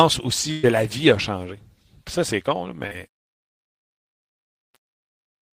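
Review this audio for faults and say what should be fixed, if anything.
Burst of packet loss from 0.51 to 0.66 s, just before "la vie a changé". About 120 ms of the call never made it, so the receiver kept stretching the last bit of sound and letting it sag in level. You hear that last sound held and dying away, then the speech picks up further along with that chunk simply gone. A bigger jitter buffer plus redundancy or FEC on the sender side would cover a loss this long.

Short concealed packet loss from 2.87 to 2.94 s, right after "changé ça c'est con". Roughly 40 ms arrived too late for the decoder, which papered over the hole by extending the previous sound and then crossfading back into the real stream. It comes across as a quick smear in the speech rather than a dropout, and a brief consonant can get swallowed there. The same jitter-buffer and FEC tuning would mop this one up as well.

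Truncation distortion on a fade from about 3.08 s to the end. The fade-out starting around 3 s is done by a stage that throws away resolution without dither, which fits roughly 7-bit quantisation. As the level drops toward the last few steps, the tail turns grainy instead of melting away. Do the fade at full float or 24-bit precision and dither whenever you reduce word length.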